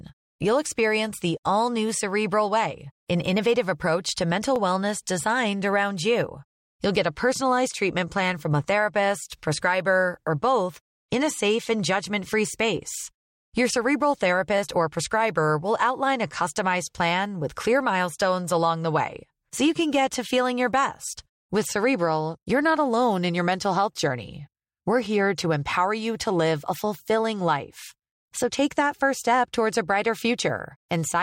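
Overlapping chunks at 4.56 to 4.58 s, between "innovative approach to mental" and "wellness designed around": the audio was handled in 10 s chunks, and the next chunk began 20 ms before the previous one ended. That sliver plays twice, heard as a brief click-like stutter.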